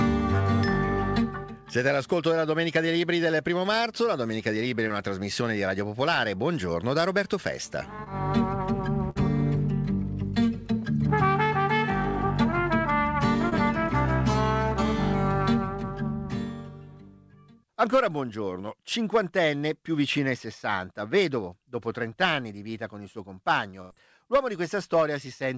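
At 4.88 to 4.92 s there is a short concealed packet loss. About 20 ms of audio did not reach the decoder in time. The receiver continued the preceding sound across the gap, then blended back into the real audio. It is heard as a brief smear or wobble. The same fault recurs at 8.04 to 8.08 s.

At 9.10 to 9.17 s comes a burst of packet loss. About 60 ms of audio is gone. The receiver stretched the last sound over roughly 55 ms and turned it down. The result is a held buzz or fading hiss. The audio then jumps ahead.

A third short concealed loss at 13.49 to 13.53 s gives the same brief smear.

At 23.81 to 23.92 s a longer burst of packet loss removes about 80 ms. The filled stretch runs about 87 ms, fading as it goes. The audio then resumes further on, with a skip.

Throughout, the call path passes nothing above 8 kHz. That fits a wideband codec such as G.722 at 64 kbps.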